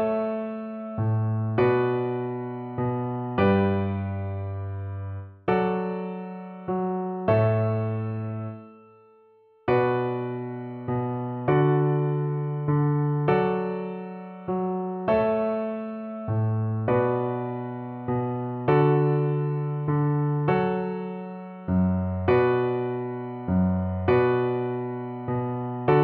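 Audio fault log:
No faults are audible; the signal plays continuously throughout, with nothing breaking its flow.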